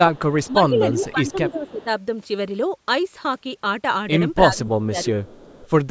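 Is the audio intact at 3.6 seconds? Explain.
Yes, the speech at 3.6 seconds is intact, passing cleanly through the call microphone processing, which limits it to nothing above 8 kHz and trims the lowest bass as a normal part of that path.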